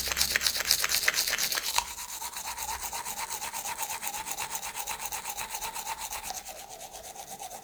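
A short recording of everyday sounds with nothing technically wrong to point to anywhere in it.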